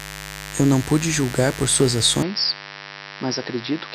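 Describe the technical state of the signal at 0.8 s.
At 0.8 s the speech carries mains buzz, present from start to finish. Sharp switching spikes tied to the 50 Hz supply, arriving twice per cycle, leak into the signal and spread harmonics of 50 Hz up into several kHz, giving a steady, raspy buzz only somewhat below the speech. A plain hum would be a smooth low tone. This buzz is edgy and bright, and its rich upper harmonics set it apart.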